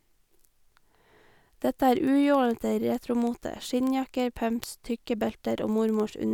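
From 0.11 to 6.32 s, word clock ticks: an unlocked digital link slips one sample roughly every 50 ms, giving steady sharp ticks, unlike irregular dropout clicks.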